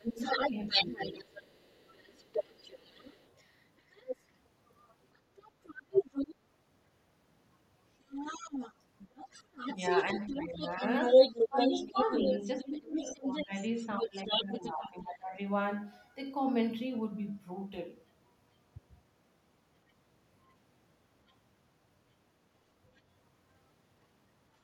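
From 0.00 to 1.28 s the talker's speech dips by up to about 15 dB over roughly half a second in total: speech suppressed in double talk, likely because the echo canceller ducked everything while both sides spoke.

From 0.20 to 6.35 s and 8.01 to 14.9 s the other side's voice is leaking through at about the same level as the talker. This is likely echo left behind by the canceller.

Between 9.75 and 15.38 s the suppression returns, for about 3 s in total, again reaching about 15 dB.

Faint scraps of the other voice surface at 19.9, 21.3 and 23.0 s, around 35 to 40 dB below the speech.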